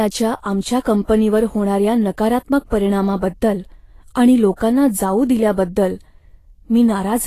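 Right from the start the speech has a grainy, hissy treble with nothing above 14.2 kHz, likely Vorbis compression at a low bitrate, around 33 kbps. Pre-echo shows up at 0.80 to 0.85 s, 2.67 to 2.72 s and 4.56 to 4.60 s: a brief hiss smears ahead of each sharp attack as block-wide quantisation noise spills early.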